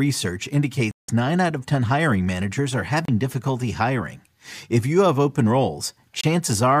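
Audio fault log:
0.91–1.09 s, 3.05–3.08 s and 6.21–6.24 s, Bluetooth stall: the speech drops to dead silence for 173 ms, then 31 ms between "hiring managers are" and "difficulty hiring", then 26 ms, and resumes where it left off. The likely cause is interference delaying packets until the headphones' buffer ran empty and playback paused for the resends.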